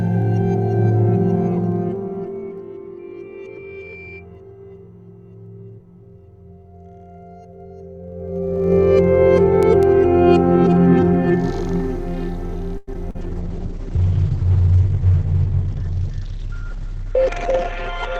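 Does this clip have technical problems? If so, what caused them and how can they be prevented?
Yes, there are several.

Zipper noise, 1.32 to 2.84 s and 8.0 to 8.76 s: the gain was moved in 1 dB steps with no smoothing, about 30 steps per second. It dropped roughly 20 dB, then rose roughly 20 dB, and each step clicked, giving a ticking zip. Ramping the gain per sample prevents it.

Loudspeaker feedback squeal, 2.99 to 4.27 s: the microphone picked up its own loudspeaker, and the loop gain passed one at 2.4 kHz. That tone swelled over about a second into a squeal roughly as loud as the sound. Lower monitor gain, better placement or a notch filter prevents it.

Call audio freeze, 12.77 to 12.89 s: the receiver ran out of audio, likely because packets were held up in transit and the jitter buffer emptied. It stretched the last sound into a fading fill for 100 ms, then resumed where it stopped. 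Nothing was lost, but the delay grew by 100 ms. A deeper adaptive jitter buffer or a steadier network path prevents it.

Short concealed packet loss, 12.93 to 12.96 s and 13.10 to 13.16 s: 40 ms of audio never arrived each time. The decoder patched 10 ms and then 41 ms by extending the preceding sound, which gives brief smears just after the freeze. Forward error correction or a less lossy link prevents it.

Call bitrate drop, 13.22 s to the end: the bandwidth estimate collapsed, and the encoder fell from 64 to 9 kbps, staying at its lowest for about 4.5 s. The audio band shrank from 20 kHz to 8 kHz, so the sound turns muffled and rough. Better network capacity or a gentler rate-control floor prevents it.

Jitter buffer speed-up, 15.49 to 17.41 s: the buffer held too much audio, and the receiver trimmed roughly 70 ms in small pitch-period cuts. The sound plays at about 104% speed with unchanged pitch. 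More gradual buffer draining prevents it.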